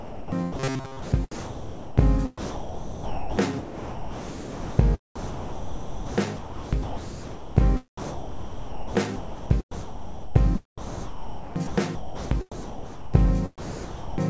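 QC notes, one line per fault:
0.00–4.79 s, 5.16–7.57 s, 7.98–13.28 s: sound chopped by the voice detector. About 3.6 s, 2.1 s and 3.8 s are swapped for comfort noise, likely from detector switching. The sound turns choppy.
0.58–0.99 s: robotic sound from repeated short buffers. Most of the stretch is likely repeated short buffers. This imposes a rigid 133 Hz metallic buzz, which fits a buffer of about 7.5 ms.
13.58–14.18 s: sound dropped by the voice detector. About 0.6 s of sound is lost to steady comfort noise, likely because the detector mistook it for background.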